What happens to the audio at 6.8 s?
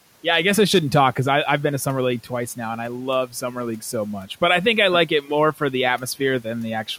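At 6.8 s the speech carries on intact, with only the room's own background noise sitting well beneath it, about 26 dB below the speech.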